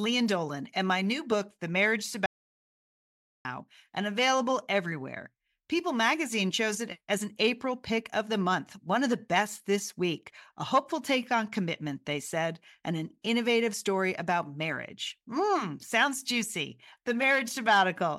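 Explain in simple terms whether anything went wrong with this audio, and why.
The audio input most likely dropped out for a moment, through a disconnected device, a failed link or an accidental mute, while recording carried on. This audio dropout to silence cuts the speech off at 2.26 s and brings it back at 3.45 s, leaving about 1.2 seconds of dead silence with no room sound.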